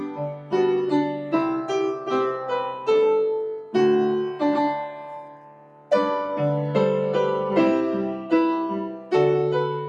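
A speech-style noise suppressor has been left running on this audio, and it treats steady tones and ambience as noise. So the level keeps swinging by about 10 dB, with sustained parts sinking while sharper onsets punch through, giving a pumping, thinned-out feel throughout. You can hear the sound cut by the noise suppressor most clearly at 0.00–0.53 s (down about 11 dB), 1.12–1.33 s (about 7 dB), 3.57–3.75 s (about 11 dB), 4.92–5.91 s (about 11 dB), and 8.88–9.12 s (about 10 dB). In each of those spots, held or decaying material gets pulled down or has its tail chopped short.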